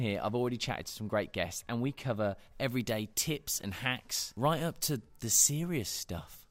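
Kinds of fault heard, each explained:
Pre-emphasis left on: from 2.35 s to the end, the sound turns thin, bright and hissy, with sibilants spitting forward. The treble boost of the CD 50/15 µs pre-emphasis curve was never undone by its matching de-emphasis, leaving 10 kHz about 8 dB hotter than 1 kHz.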